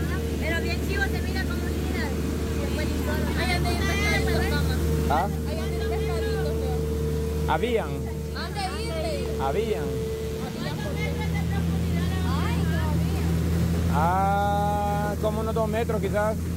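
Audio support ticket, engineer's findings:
Mains buzz, 8.99 s to 12.23 s. Steady raspy buzz on a 60 Hz mains base, sitting roughly 25 dB under the programme. Probable source is a dimmer, rectifier or unshielded run. Sharp switching spikes twice per cycle spray harmonics up into the kHz range.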